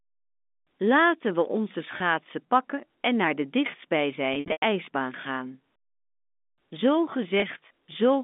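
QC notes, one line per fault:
1.98–2.00 s, packet loss with pitch repetition: a single 20 ms packet seems to have gone missing between "we onze" and "pakken en naar de"; the receiver filled it by repeating the last pitch period, heard as a brief held, buzzy note.
4.34–4.62 s, packet loss with pitch repetition: about 200 ms lost, scattered over 280 ms, longest run 100 ms; repeated pitch periods fade toward silence before speech cross-fades back, over the narrow G.711 telephone band.
7.40–7.42 s, packet loss with pitch repetition: another lone 20 ms gap bridged by a repeated pitch period, a momentary buzzy hold.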